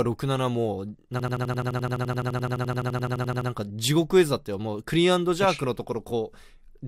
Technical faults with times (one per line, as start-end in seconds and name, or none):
1.19-3.50 system hang loop